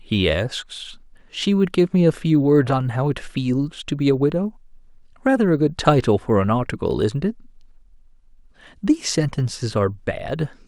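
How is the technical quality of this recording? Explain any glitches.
There's one real problem, and it runs the whole way through: a resampler restarted on every block. The converter handled each 20 ms chunk as if it stood alone, so at every chunk edge it guessed the missing neighbouring samples wrong and left a tiny error. Those errors land 50 times a second, so you hear a buzz at 50 Hz riding under the speech and dropping out in the gaps. It sounds like a conversion from 48 kHz down to 44.1 kHz.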